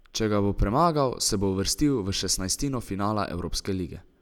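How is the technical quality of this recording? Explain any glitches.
No glitches can be heard.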